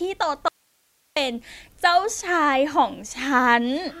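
An audio dropout to a faint residue runs from 0.48 to 1.16 s. The speech cuts off abruptly for 0.68 s, leaving only hiss about 45 dB down, then snaps back mid-flow, likely because the incoming signal was lost while the downstream path stayed live.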